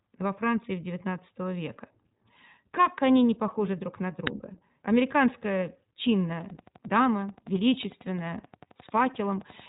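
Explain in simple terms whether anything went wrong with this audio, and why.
Three things went wrong. The whole recording went through the iLBC codec, a phone-call speech codec. It cuts everything above 3.8 kHz, so the voice sounds muffled. It codes speech in 20 ms chunks, which leaves a clearly rough, slightly synthetic edge.

At 4.27 s there is an uninitialised buffer. The player sent out a block of memory before any real audio was written into it. You hear a tiny, harsh crack, about 1.5 ms long, which fits a 64-sample buffer.

From 6.41 s to 9.61 s there is a train of clicks. About forty sharp ticks arrive at a steady pace, roughly 11 per second, and they are about as loud as the speech. They sound like popping laid over the voice. The likely cause is electrical interference or a faulty connection or power supply.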